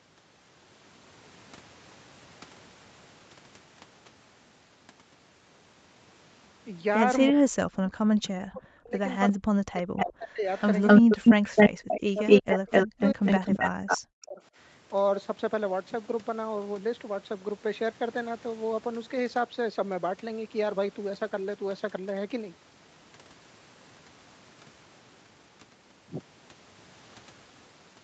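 From 7.31 to 9.0 s the speech sinks and breaks up in pieces. It falls by around 40 dB at its deepest. This is speech suppressed in double talk. The likely cause is an echo canceller that heard both sides at once and turned everything down.

At 9.27 s a faint echo leak appears. A copy of the voice returns 350 ms late, well below the main speech. The canceller likely failed to clear a loudspeaker pickup.

From 9.32 to 10.47 s the suppression returns. The voice again drops by as much as about 40 dB.

Inside that stretch, from 10.0 to 10.12 s, another echo leaks through. It arrives 259 ms late and is only a little quieter than the speech.

From 10.56 to 13.98 s the echo leak becomes sustained. The 259 ms copy now sits slightly louder than the direct voice.

From 11.01 to 14.42 s the suppression overlaps it. The speech is cut in pieces by up to about 40 dB.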